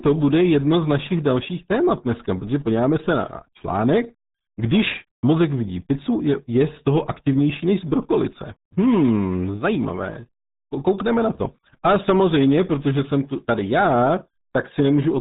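From start to finish the speech carries RealAudio 14.4 codec damage, which fits the 8 kbit/s RealAudio 1 dial-up codec. Nothing above 3.8 kHz survives, so the speech is muffled and dull, and the heavy low-bitrate coding adds a gargly, watery texture throughout.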